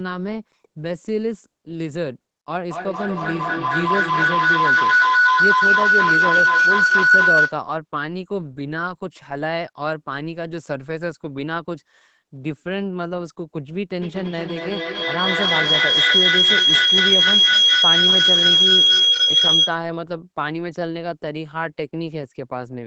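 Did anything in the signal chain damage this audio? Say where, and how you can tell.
Yes. Feedback howl at 2.69–7.64 s and 14.02–19.81 s: a room loop between call devices gains each trip, building tones near 1.5 kHz then 3 kHz, repeating about every 200 ms, up to about 9 dB over the speech.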